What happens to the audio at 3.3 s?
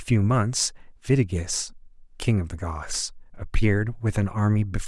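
Nothing goes wrong at 3.3 s; the speech carries on intact through that moment, with no dropout, click, distortion or other fault.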